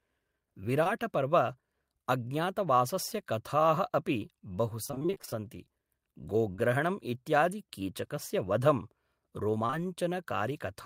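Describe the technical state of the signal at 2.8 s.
At 2.8 s the speech signal is intact, with no audible fault at that moment.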